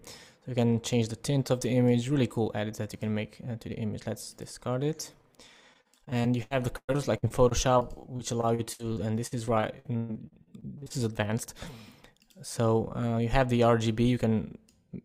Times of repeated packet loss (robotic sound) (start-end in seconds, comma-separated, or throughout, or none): 5.73-10.92